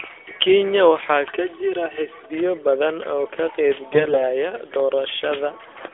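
Channel delay comb filtering from 1.3 to 2.3 s: one channel lags by about 3 ms before the mono sum, cutting regular notches from near 200 Hz upward, so the speech turns hollow and phasey. AMR bit errors from 3.92 to 4.24 s: heavy bit corruption in the less protected frame data misplaces the excitation pulses, making the voice hoarse, scratchy and gargly.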